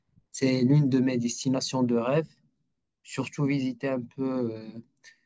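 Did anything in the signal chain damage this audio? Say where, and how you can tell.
No, nothing in the signal chain audibly damaged this speech recording. Listening through every stage from capture to playback turns up no event or artefact that would point to a fault anywhere along the way.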